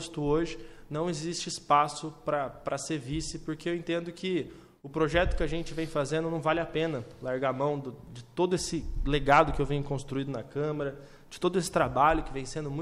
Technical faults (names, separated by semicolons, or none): none